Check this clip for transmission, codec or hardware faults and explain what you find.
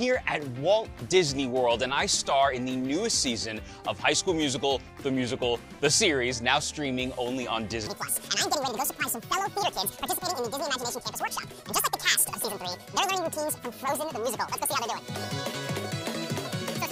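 One fault is present: a section at the wrong speed. From 7.87 s to the end of the clip, the audio suddenly turns high and hurried, running at 1.88 times its proper rate, with pitch lifted by roughly ten semitones. Because pitch and tempo jump together at a single instant, this is likely a playback or editing stage running that portion against the wrong clock rather than a deliberate pitch effect.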